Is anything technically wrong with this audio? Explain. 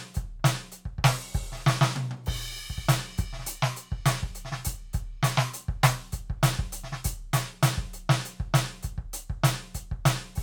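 No, the music comes through as a steady, intact signal with nothing technically amiss to be heard.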